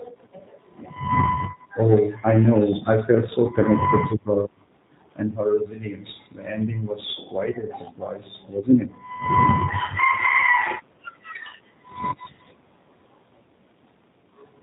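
A speech clip carrying G.729 codec damage from start to finish: the top end stops dead at 4 kHz, and the voice has a plainly audible, slightly rough, synthetic edge, since it's rebuilt from a pitch predictor and a handful of pulses per frame, which fits an 8 kbit/s G.729A-style VoIP coder.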